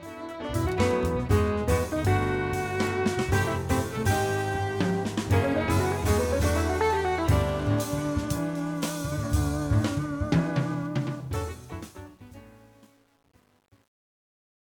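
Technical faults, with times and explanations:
10.73–14.72 s, truncation distortion on a fade: the fade-out stage drops low bits without dither, which fits about a 9-bit word. As the level sinks, the waveform collapses into coarse steps, turning gritty, worst from 11.56 s onward.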